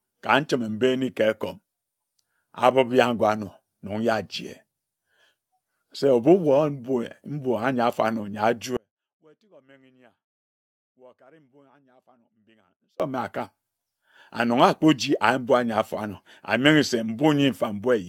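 Throughout the speech, the signal points to generation loss, likely from being passed through AAC-LC at 96 kbit/s roughly five times over. Each decode and re-encode lands on a shifted frame grid and quantises again, so the small errors and spectral gaps from every pass stack up. The result sounds swirly and hollow, more smeared than 96 kbit/s alone would produce, and consonant onsets and other attacks come out blurred rather than crisp.

From 8.77 s to 13.00 s there is an audio dropout to a faint residue. The wanted signal was lost for 4.23 s while the path downstream stayed live, likely a break upstream of a still-running chain. The speech cuts off abruptly rather than pausing or fading, and the gap holds only a faint leak of sound at about 35 dB below normal level before the speech snaps back in mid-flow.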